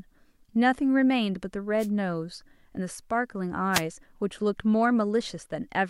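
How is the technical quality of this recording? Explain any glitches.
Two brief bursts of static break into the speech, at 1.78 to 1.88 s and 3.72 to 3.82 s, each lasting about 0.1 s. Both are wireless microphone noise hits: the analogue FM radio link momentarily faded as reflected signals cancelled, so receiver noise surged up over the voice as a short swish.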